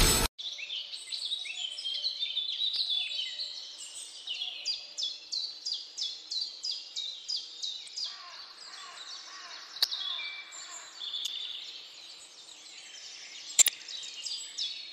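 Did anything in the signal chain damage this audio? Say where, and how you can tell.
Yes, at the codec stage: corrupt frames got decoded. Short bursts hit at 2.74, 7.86, 9.81, 11.25 and 13.58 s, each lasting one to seven frames, and the last one is loudest. Flipped bits gave the decoder wrong gains or codes, so it sprayed energy into the wrong frequencies.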